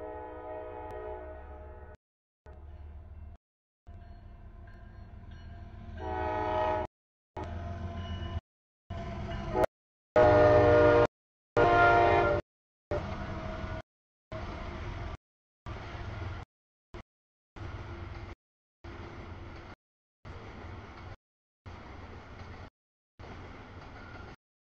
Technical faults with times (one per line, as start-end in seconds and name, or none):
0.91 damaged data in a compressed stream
9.64 damaged data in a compressed stream